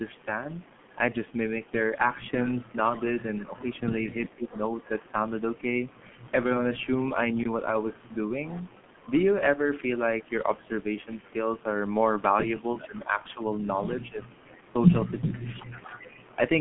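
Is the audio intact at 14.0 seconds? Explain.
No. At 14.0 s three faults overlap.

G.723.1 codec damage runs through the whole clip. At 6.3 kbit/s, with its long 30 ms frames and slowly updated voice model, the speech turns hoarse and blurred, with smeared consonants inside a 150 Hz to 3.4 kHz band. That grainy roughness is what separates it from simple band-limiting, which only muffles.

An echo leak spans 12.77 to 16.32 s. A copy of the voice returns about 381 ms late at roughly 15 dB below the speech, most likely because the loudspeaker side's echo canceller let loudspeaker pickup through. It is a distinct delayed repeat, not the smooth tail of room reverberation.

Speech suppressed in double talk runs from 12.86 to 15.89 s. The talker's level sags by up to around 20 dB in pieces totalling about a second, likely because the echo canceller turned everything down while both sides spoke. 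The dips are partial and coincide with the overlap, unlike packet-loss dropouts, which strike at random.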